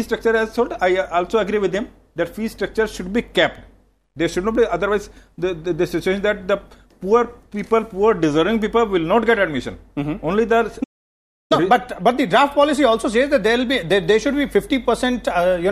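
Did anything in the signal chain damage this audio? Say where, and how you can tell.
Yes. At the playback stage there is a playback stall: the sound halts mid-flow at 10.83 s and stays silent until 11.52 s, a gap of about 0.67 s, before resuming. The output simply stops rather than fading or glitching, which points to the player being starved of data or its audio thread being blocked. The likely cause is a buffer underrun or a scheduling hold-up on the playback side, after which output picked up again.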